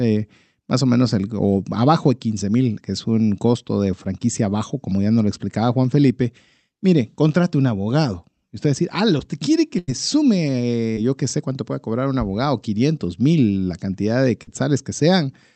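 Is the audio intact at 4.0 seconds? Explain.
No. From 4.03 to 4.07 s, between "es un costo de" and "bajo como ya nos", there is a short concealed packet loss. About 20 ms of audio arrived too late for the decoder. The receiver covered the gap by extending the preceding sound, then blended back into the real signal. The result is a brief smear or wobble at that point. The call path's band limit of about 8 kHz can still be heard around it.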